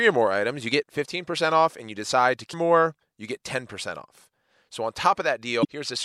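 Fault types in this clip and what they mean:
Damaged data in a compressed stream: corrupted bytes in the encoded stream make the decoder misread a frame and resync on the next header. It's a quick blip of about 40 ms at 2.50 s, just after "and you decide to", and another around 5.61 s.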